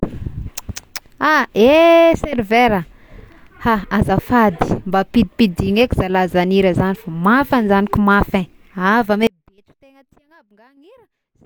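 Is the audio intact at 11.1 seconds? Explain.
No. At 11.1 s the speech sits inside an audio dropout to a faint residue that begins at 9.27 s and runs to the end of the clip. The signal likely broke off upstream while the path stayed live, so only a faint leak remains, roughly 35 dB down. On a waveform the envelope collapses abruptly to a thin sliver, and a spectrogram shows the energy vanishing at once into a dim, washed-out band.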